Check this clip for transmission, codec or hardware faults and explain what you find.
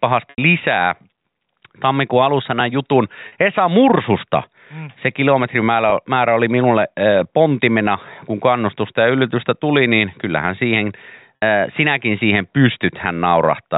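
The clip has one fault type, packet loss with pitch repetition, heard four times in the speech: 0.30–0.38 s (80 ms), 3.28–3.32 s (40 ms), 5.90–5.92 s (20 ms) and 11.36–11.42 s (60 ms). The gap lengths step in multiples of 20 ms, which fits a 20 ms packet size. At each gap the receiver replays the last pitch period and fades it out over about 50 ms. The 20 ms and 40 ms gaps sound like a brief held, buzzy tone. The 60 ms and 80 ms gaps outlast the fade, so the sound thins toward silence before speech returns through a short cross-fade. The G.711 telephone coding band limit is audible as the cut above 4 kHz.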